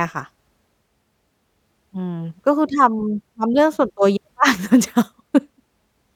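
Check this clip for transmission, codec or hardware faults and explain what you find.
No transmission, codec or hardware faults can be heard anywhere in this speech recording.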